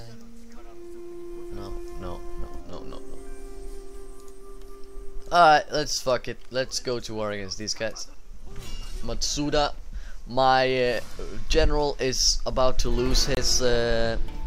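At 13.35 to 13.37 s the sound cuts to about 24 ms of silence and then resumes, most likely a Bluetooth stall, with no repeated fragment.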